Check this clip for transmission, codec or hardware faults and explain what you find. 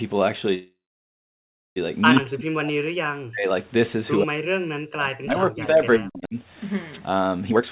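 Five kinds of fault can be heard, all in the first eight seconds of this speech.

From 0.54 to 1.78 s there is a call audio freeze, likely from packets held up so the jitter buffer ran dry. The last sound continues as a fading buzz, then about 1.0 s of silence. The waveform shows a decaying tail into a flat line, and speech resumes with nothing lost, just delayed.

At 2.15 to 2.21 s a brief echo leak appears, likely because a far-end loudspeaker echo got past its canceller. A faint copy, about 10 dB below the speech and 128 ms late, shows on the spectrogram as a weaker, shifted repeat of the preceding harmonic pattern.

Speech suppressed in double talk occurs from 2.2 to 3.49 s and from 4.23 to 6.37 s, likely because the echo canceller confused both talkers and turned everything down. The voice dips by up to roughly 40 dB. The waveform envelope drops sharply where the voice is turned down.

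At 6.92 s a wireless microphone noise hit sounds as a short swish of static. An FM radio fade lets receiver noise surge over the voice. The spectrogram shows a broadband vertical smear about 60 ms wide.

From 7.48 to 7.63 s there is a jitter buffer speed-up at 189% speed. Roughly 150 ms of pitch-period slices were cut to shrink an overfull buffer. The speech sounds hurried at unchanged pitch, with syllables compressed in time and harmonic spacing unchanged on the spectrogram. Throughout the clip, G.711 coding limits the band to 4 kHz.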